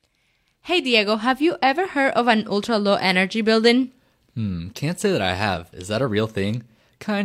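Speech recording with no audible technical faults.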